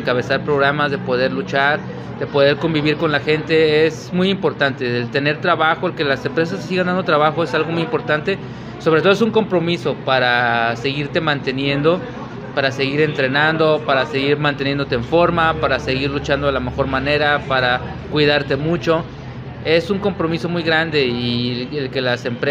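Nothing in the audio stood out as a technical fault on listening.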